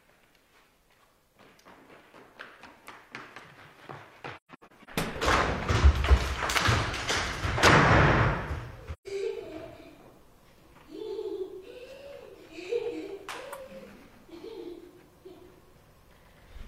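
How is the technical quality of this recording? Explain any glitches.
The recording has two short gaps from AAC frame loss with muting. Between 4.36 and 4.89 s, about 0.3 s of audio is lost in scattered holes, the longest around 150 ms. A single 128 ms hole follows at 8.93 to 9.07 s. The decoder zeroed the missing frames, so the overlapping windows fade the sound down and back up. Unlike a hard dropout, the edges are soft.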